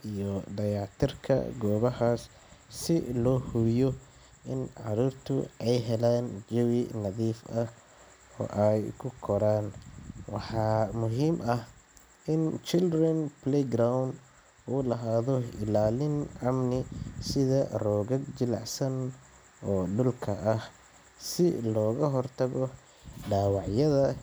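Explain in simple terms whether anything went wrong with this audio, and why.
Nothing went wrong with this speech recording. Listening through it, no moment stands out as a technical problem.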